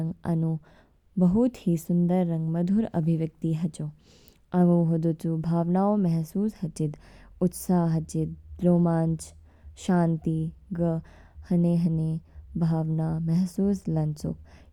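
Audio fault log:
No faults heard in this speech.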